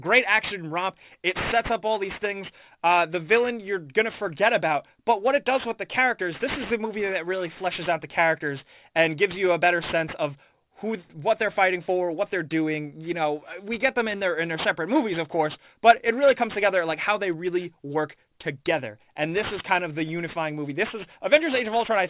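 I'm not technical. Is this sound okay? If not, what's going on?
No. From start to finish, the high, hissy parts sound gritty and metallic, as if sprinkled with sand. That's aliasing: the sound was squeezed into a lower quality without first removing what lay above 4 kHz, which fits a drop to an 8 kHz rate, so those highs fold back as wrong tones.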